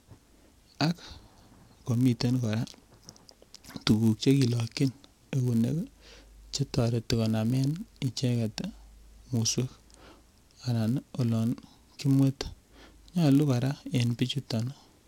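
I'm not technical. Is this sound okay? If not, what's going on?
No. A filter restarted on every block runs through the whole speech clip. The audio is processed in small chunks, and the filter forgets what it was doing at the end of each one, starting the next from silence. Each restart leaves a tiny click, and they come about 86 times a second, blending into a low buzz under the speech. That rate points to chunks of 512 samples.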